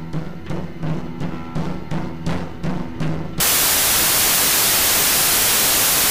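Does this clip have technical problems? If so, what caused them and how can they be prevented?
Yes: from 3.40 s to the end, the music turns into loud, harsh broadband noise because samples are built from the wrong bytes, so the jittery low bits dominate. Check byte order and alignment when reading sample data.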